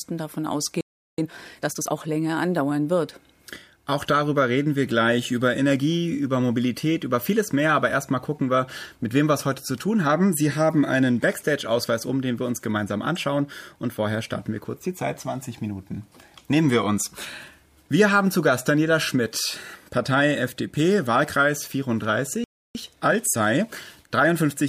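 At 0.81 s the sound cuts out mid-flow and stays silent until 1.18 s, a gap of about 0.37 s. This is a playback stall, likely caused by the player running dry of buffered data or having its output thread blocked.

From 1.18 s to 1.92 s the audio runs at 1.5 times normal speed with unchanged pitch. This is time-compressed catch-up: the player clears the backlog from the stall by dropping short segments and cross-fading across the joins. The result sounds noticeably hurried.

The same sequence occurs near the end. A second playback stall silences the output from 22.44 s to 22.75 s, about 0.31 s. Catch-up then runs from 22.75 s to 24.59 s at a gentler 1.15 times speed. That pace is only slightly rushed, but it stretches over nearly two seconds.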